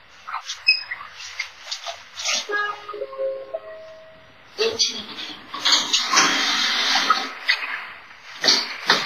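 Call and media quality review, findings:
Ringing, washy smearing throughout, with hiss breathing alongside the signal. Nothing above 15.6 kHz. Heavy damage, likely WMA compression at a low bitrate, fitting roughly 24 kbps. Long transform blocks smear quantisation noise over tens of milliseconds. Weak components zeroed.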